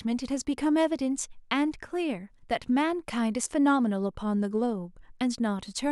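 No technical faults detected.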